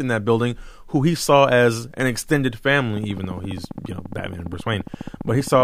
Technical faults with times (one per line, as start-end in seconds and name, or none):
2.97-5.62 train of clicks